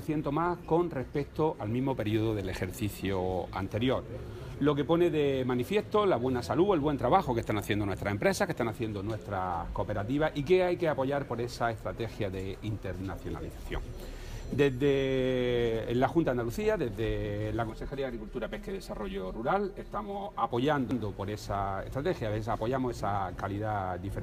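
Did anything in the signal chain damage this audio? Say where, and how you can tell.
Yes. From 17.7 s to 20.51 s the sound turns hollow and phasey. This is channel delay (comb filtering) at the driver or buffer stage: one channel arrives about 5 ms late before a mono sum. A spectrogram shows fixed, evenly spaced dark notches, the first near 100 Hz.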